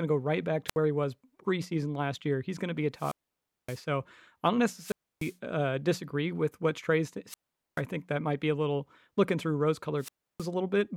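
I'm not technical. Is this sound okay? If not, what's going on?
No. This is a wireless microphone squelch dropout: the radio signal fades, so the receiver shuts the sound off. Unlike an ordinary digital gap, each one starts with a brief swell of hiss before the near-silence. It happens at 0.67, 2.96, 4.76, 7.27 and 9.98 seconds, with gaps from about 0.07 to 0.57 seconds.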